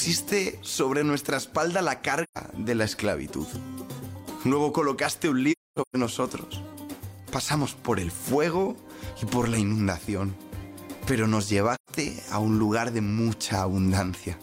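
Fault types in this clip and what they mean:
AAC frame loss with muting: missing frames are decoded as silence, leaving three soft-edged gaps near 2.23, 5.51 and 11.75 s, the middle one fragmented.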